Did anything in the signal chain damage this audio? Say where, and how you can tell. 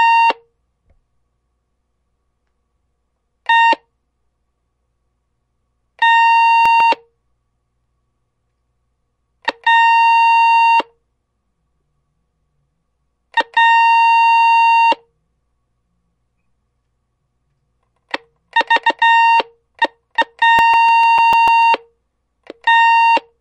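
Yes: CD scratch ticks, at 6.66 to 7.99 s and again at 20.44 to 21.77 s, from the disc playback stage. Each burst is ten short ticks, roughly seven or eight a second, each only a few milliseconds long. The ticks are of uneven strength. That pattern comes from a surface blemish passing the laser once per revolution, wiping out more data than error correction can rebuild, so the player interpolates or mutes those samples.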